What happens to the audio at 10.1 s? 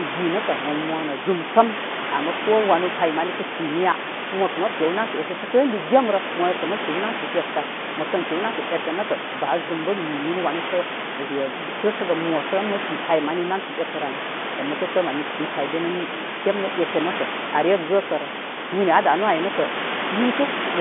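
Nothing goes wrong at 10.1 s: the speech carries on intact through the telephone line, with only the room noise about 8 dB below it.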